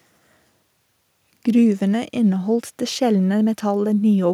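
Nothing technically wrong turns up anywhere in this short bit of speech, so there are no problem moments to time or causes to explain.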